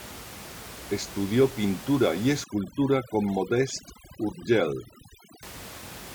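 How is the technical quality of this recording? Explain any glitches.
The main problem is overdone noise removal between 2.44 and 5.43 s. Before and after that stretch, room noise sits about 16 dB below the speech. Inside it, a noise reduction stage set too aggressively pulls individual frequency bands down or out whenever their level comes close to its noise estimate. The quieter parts of the speech fall below that threshold and are removed along with the background. As a result, the floor drops and breaks up into twinkling, chirpy specks.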